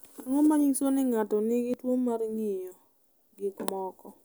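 A speech clip with two brief skips, at 0.76 s and 1.74 s. Each drops about 20 ms, and the sides are joined with no silence. This is likely audio missing between chunks: a recorder working in 1.0 s chunks loses a sliver at each handover.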